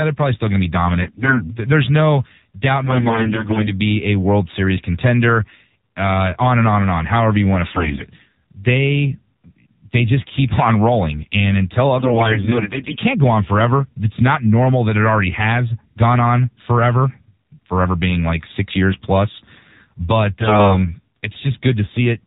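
The whole clip of speech is carried by the AMR narrowband mobile codec. Nothing passes above 4 kHz, and the voice has a buzzy, synthetic edge, which fits a low AMR-NB mode near 7.4 kbps. That muffled top end and vocoder buzz set it apart from plain low-pass filtering.

AMR bit errors strike at 1.02–1.56 s, 2.84–3.73 s, 7.68–8.03 s, 11.98–12.99 s and 20.40–20.88 s. Flipped bits in weakly protected parts of each frame misplace the excitation pulses and skew the finer parameters. Pitch and level hold, but the voice turns hoarse, scratchy and gargly, worst at 7.68 s. Unlike dropouts or concealment, the sound never goes silent or smeared.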